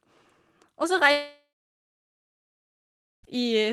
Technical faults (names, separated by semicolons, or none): long network dropout